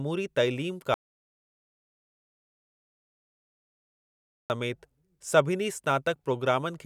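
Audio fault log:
0.94–4.50 s, audio dropout to silence: the input feeding the recorder was likely lost for about 3.56 s, through a disconnected device, a failed link or a stray mute, while writing carried on with silence. The speech breaks off abruptly mid-flow and returns just as suddenly. The gap between is dead digital silence with no room tone or background left, so whatever was spoken in that stretch is simply missing.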